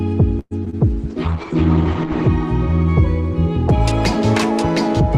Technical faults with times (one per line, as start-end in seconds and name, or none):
0.39-0.53 call audio freeze
0.65-0.86 short concealed packet loss
1.11-2.35 call bitrate drop